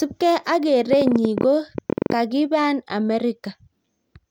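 A short bit of speech with a train of clicks running from 0.93 s to 2.13 s: about fifteen sharp ticks at roughly 13.4 per second, spaced unevenly rather than like a metronome, and they poke out a good way above the speech, something like 15 dB hotter. They all have much the same shape, so it sounds like one repeating pulse. That's most likely interference from nearby equipment or a faulty connection or power supply.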